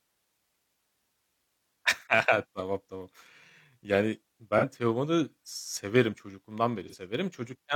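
Speech with AAC frame loss with concealment at 4.57 s and 6.88 s. Each loss gives a smeared, noisy patch of about 43 ms. That fits one lost frame filled in from the last good spectrum.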